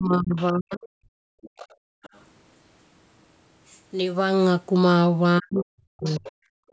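Speech in a call recording, hit twice by speech suppressed in double talk: from 0.0 to 0.93 s and again from 5.39 to 6.32 s, the talker dips by up to about 40 dB, most likely because the echo canceller could not separate the talker from the far end's echo. Unlike a network dropout, the dips line up with the other voice. That other side's voice leaking through is audible as a faint second voice at 0.36 to 0.48 s, 1.42 to 2.22 s and 5.56 to 6.32 s, about 20 to 25 dB below the talker. Its likely source is loudspeaker sound left in the microphone, which is why it is a separate voice rather than a delayed copy of the talker. Background gated by the echo canceller shows as the room sound dropping by about 40 dB from 1.21 to 2.03 s, and again at 6.6 s to the end. Here the room tone falls away rather than the talker, which distinguishes it from double-talk cuts that clip the talker.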